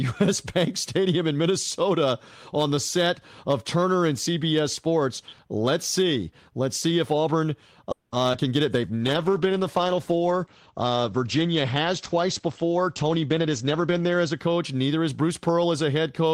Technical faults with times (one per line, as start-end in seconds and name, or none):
0.00-16.33 hard clipping
7.91-8.14 call audio freeze
8.32-8.40 short concealed packet loss
8.87-14.45 call bitrate drop
12.46-14.47 jitter buffer speed-up